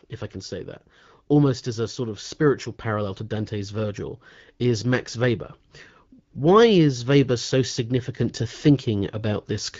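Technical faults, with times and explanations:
No faults turn up here; the speech simply comes through the AMR wideband (HD Voice) codec at a rate that fits 12.65 kbit/s, where it stays clear.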